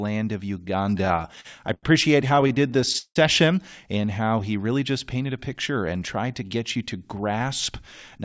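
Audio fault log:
0.98–1.85 s and 2.29–3.17 s, repeated stalls (stutter): packets arrived too late to keep the jitter buffer fed, so playback kept running dry. Each time, the receiver stretched the last sound until fresh audio came. The first run has 9 such holds totalling 209 ms, the longest 90 ms. The second has 12 totalling 289 ms, the longest 174 ms, with the longer holds fading down. Nothing is lost, but the speech halts and jerks. On a spectrogram, frozen, smeared harmonic bands repeat. The waveform shows copied cycles, with the longer holds decaying in level.
4.02–4.30 s, jitter buffer slow-down: just before "he really just painted", the buffer was low. The receiver built a reserve by repeating single pitch periods over and over, adding 37 ms. This portion plays at about 90% speed with unchanged pitch, so the sounds are slightly drawn out. The spectrogram keeps the same harmonic spacing while the syllables widen in time. 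The waveform shows runs of near-identical periods back to back.
6.23–8.16 s, jitter buffer speed-up: after "painted a picture and", the buffer held more audio than its target. The receiver trimmed short pieces of one or a few pitch periods again and again, removing around 150 ms in total. This portion plays at about 107% speed at the same pitch and sounds hurried. On a spectrogram, harmonic spacing is unchanged but syllables and pauses are compressed, within the band that stops at 8 kHz. The waveform shows slightly shortened periodic stretches.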